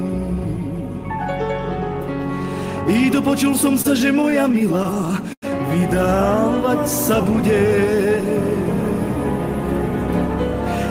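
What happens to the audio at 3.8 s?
At 3.81 s there's a short stall from a late packet, running to about 3.86 s. The next packet hadn't turned up in time, so the jitter buffer ran dry and the receiver padded the gap by stretching the last bit of sound for about 29 ms. Then it picked up right where it left off, so nothing is skipped. You just hear a sound held a touch too long, with a faint buzz or dip, and everything after it lands about 29 ms later.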